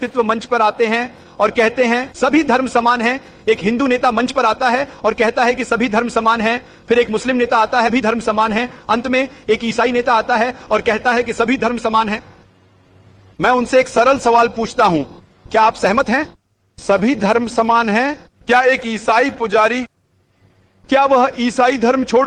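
At 7.87 s the receiver discarded roughly a second of audio, either lost in transit or dropped by an overflowing jitter buffer, with later audio already queued. This skip ahead joins both sides of the cut almost directly, so the sound jumps forward abruptly with essentially no gap.

From 8.48 to 9.22 s the jitter buffer, still holding more audio than its target, performed a speed-up, trimming short pitch-period slices repeatedly, around 50 ms in total. Playback runs about 7% fast at unchanged pitch, giving a briefly hurried feel.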